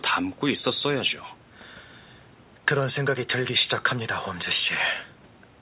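Nothing's wrong with this speech recording: it's just come through a normal call line, which is why there's no content above 4 kHz and it has that narrowband telephone sound typical of a G.711-style link.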